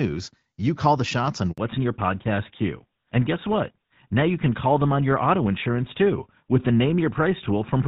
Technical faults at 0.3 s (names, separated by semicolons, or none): none